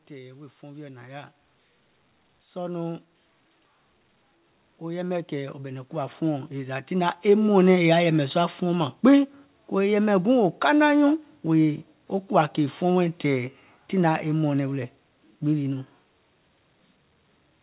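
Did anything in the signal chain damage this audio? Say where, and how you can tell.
Yes. Call processing shows automatic gain rising twice: about 5 dB from 0.08 to 1.36 s, and about 12 dB from 4.65 to 7.81 s. Speech and background swell together, so a gain control judged the input too quiet and ramped its gain up gradually.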